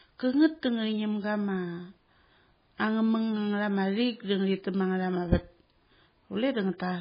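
From start to finish the speech sounds watery and swirly. Nothing remains above 5 kHz, so the s sounds are dull and chirpy. This is likely heavy MP3 compression, at a bitrate that points to around 16 kbps. Weak frequency lines flicker in and out between frames.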